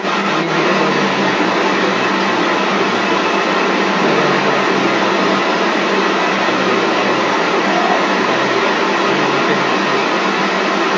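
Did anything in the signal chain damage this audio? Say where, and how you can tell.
Yes. Other side's voice leaking through runs throughout the clip, from 0 to 11.0 s. A second voice sits alongside the talker's speech the whole time, and it is strong, roughly 10 dB above the main speech, so it competes rather than trailing faintly behind. The stage is call processing. The likely cause is the device's loudspeaker playback re-entering the microphone, with the echo canceller failing to subtract it. The band-limited sound, nothing above 8 kHz, reflects the call microphone processing itself.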